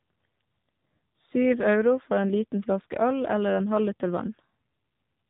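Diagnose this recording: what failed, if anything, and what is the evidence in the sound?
Codec stage: the AMR narrowband mobile codec removed everything above 4 kHz; the plainly buzzy, synthetic speech throughout fits a low mode near 7.4 kbps.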